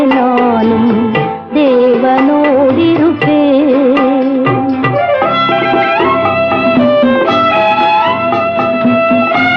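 No audible technical faults anywhere in the clip.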